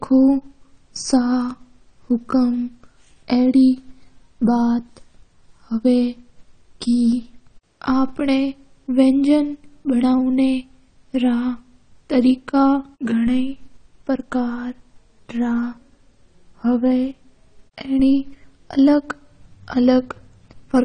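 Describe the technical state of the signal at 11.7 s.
At 11.7 s you're hearing the same damage that runs through the whole clip: speech with nothing above about 9 kHz, sounding dull and smeared, with a fizzy, warbly edge on sibilants. That's likely AAC compression, consistent with AAC-LC squeezed to around 32 kbps.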